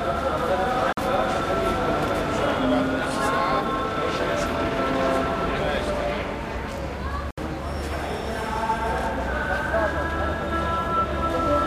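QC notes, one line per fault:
0.93–0.97 s and 7.31–7.38 s: Bluetooth dropout. The sound goes silent for about 46 ms, then about 70 ms, and comes back further along as if it had kept playing. This is likely packets reaching the headphones too late and being dropped, leaving a hole until good ones arrive.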